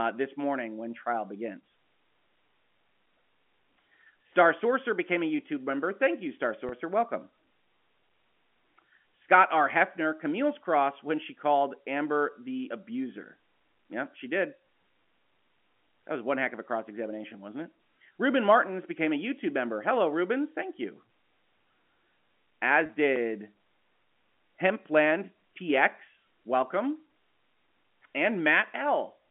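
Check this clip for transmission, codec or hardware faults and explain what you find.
Two brief dropouts are present in the speech, each a case of packet loss with pitch repetition. They occur at 6.69 to 6.72 s and 22.86 to 22.89 s, each lasting 30 ms, which fits a single lost packet. The receiver bridged each gap by repeating the last pitch period. The result is a momentarily held, slightly buzzy tone rather than silence, heard against the narrowband G.711 telephone band of 200 Hz to 3.4 kHz.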